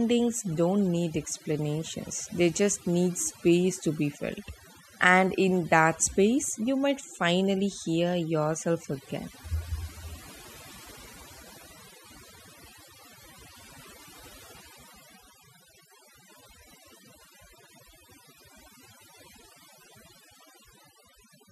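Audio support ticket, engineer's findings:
Overdone noise removal, throughout. Background pulled down, breaking up into twinkling, warbling specks where residual noise survives. Probable component: noise-reduction stage set too aggressive. Mechanism: individual frequency bands sitting near the noise estimate driven far down or gated off, so low-level parts of the speech cut along with the noise, leaving isolated bins flickering on and off.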